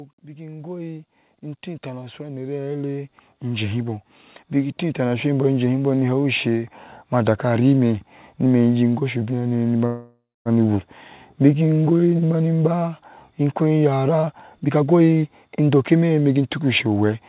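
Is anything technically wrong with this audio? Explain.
Yes. The level creeps upward twice near the start, the sound stalls once in the middle, and a stretch near the end runs noticeably fast. All of it comes through a narrowband telephone path with nothing above 4 kHz, which fits G.711 mu-law at 64 kbps.

From 0.22 to 1.15 s, and again from 1.82 to 5.54 s, the whole sound, background included, swells steadily louder: by about 5 dB in the first stretch and about 14 dB in the second. This is automatic gain rising. The gain control judged the input too quiet and raised its amplification gradually rather than in a step, so the room noise is lifted along with everything else.

From 9.86 to 10.48 s the sound freezes. The last moment is drawn out as a fading buzz and then falls to silence for about 230 ms, after which it resumes exactly where it stopped. This call audio freeze fills about 594 ms with nothing lost, which adds that much delay. 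The likely cause is packets held up in transit, leaving the jitter buffer empty so the receiver had to stretch out what it last had.

From 14.09 to 16.60 s the sound becomes hurried, running at about 123% of normal speed while the pitch stays unchanged. This is a jitter buffer speed-up. Having built up more audio than its target, the receiver trimmed many short slices, each one or a few pitch periods long, to catch up, removing roughly 0.7 s in total. The result is clipped, rushed timing rather than a pitch shift.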